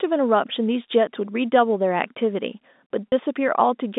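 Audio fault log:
3.09–3.12 s, packet loss with pitch repetition: a brief held, buzzy tone as the receiver repeats the last pitch period to bridge 30 ms of missing speech, consistent with one lost packet.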